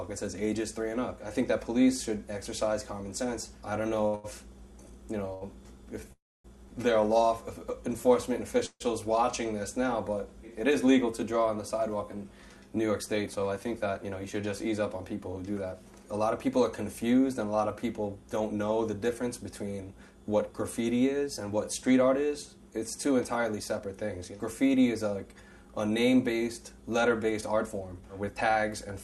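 Between 4.07 and 5.43 s the audio shows repeated stalls (stutter): three short gaps, the longest 86 ms, about 217 ms in all, where late packets left the jitter buffer empty and the last sound was stretched. It drags and catches. On a spectrogram, brief smeared, horizontally streaked patches interrupt the texture.

From 6.00 to 7.60 s a jitter buffer slow-down plays the sound at 98% speed, adding 47 ms by repeating single pitch periods to rebuild the reserve. The pitch is unchanged, but sounds are drawn out. Harmonics run unusually flat and long on a spectrogram.

Within that stretch, at 6.12 to 6.46 s, comes a call audio freeze: the sound hangs as a fading buzz for a moment, then drops to about 250 ms of silence before resuming where it left off. A second freeze at 8.66 to 8.82 s is shorter, 145 ms with about 50 ms silent. The likely cause is packets held up in transit. The waveform shows a decaying tail, then a flat line, and the spectrogram shows a blurred band fading into a blank column.

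Jitter buffer speed-ups follow at 11.12 to 14.47 s (105%, roughly 150 ms trimmed), 18.20 to 18.57 s (110%), 22.87 to 23.87 s (109%) and 27.09 to 28.57 s (112%, roughly 200 ms). Short pitch-period slices are cut to shrink excess buffered delay, so the audio sounds hurried at the same pitch. Spectrogram events appear compressed in time. Throughout, content stops near 12 kHz, as expected from the Opus call path.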